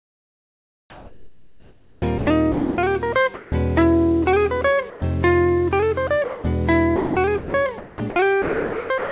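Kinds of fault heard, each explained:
Sound chopped by the voice detector: From 0.00 to 2.26 s, 6.96 to 8.16 s and 8.42 to 9.12 s the audio is broken by repeated holes filled with synthetic noise. This is likely the sender's voice detector gating on and off repeatedly, filling the gaps with comfort noise. In the first stretch about 2.1 s is replaced. Unlike a single dropout, the detector keeps toggling, so the sound comes out ragged rather than simply interrupted.
Sound dropped by the voice detector: At 2.52 to 2.78 s, 3.34 to 3.52 s, 4.90 to 5.02 s and 6.24 to 6.44 s the sound gives way to steady noise, then returns. Each gap is 0.12 to 0.26 s long, with up to 0.26 s of sound lost. This likely comes from the detector mistaking quiet passages for background and briefly stopping transmission. Each is one clean swap, unlike the rapid switching of chopping, and the call sound is band-limited, stopping at 4 kHz.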